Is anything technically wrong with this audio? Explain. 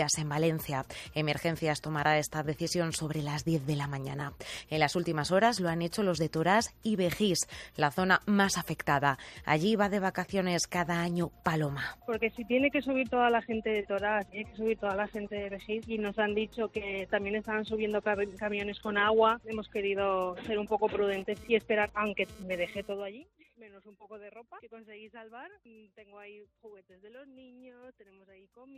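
Yes. From 21.08 to 22.93 s there is GSM phone buzz: a nearby 2G phone sending data bursts 217 times a second, which the audio circuitry rectifies. The result is a hard, raspy 217 Hz buzz rich in harmonics, about 24 dB below the signal, stuttering on and off.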